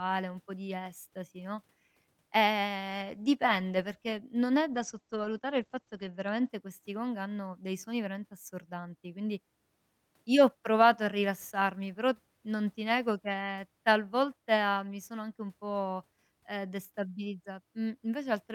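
At 4.74 s, after "dipende perché non è", a call bitrate drop: the bandwidth estimate falls and the encoder is starved, consistent with 40 falling to 11 kbps. Speech turns coarse and muffled, cut off above 8 kHz for 1.34 s, recovering by 6.55 s at "questi gong hanno dei".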